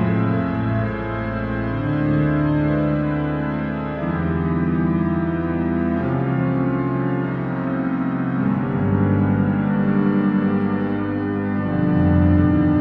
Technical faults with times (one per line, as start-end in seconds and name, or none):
none